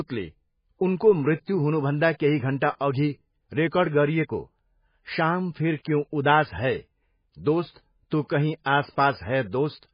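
Throughout, the speech sounds watery and swirly, cut off flat at 5 kHz on a spectrogram with flickering holes below, likely from heavy MP3 compression.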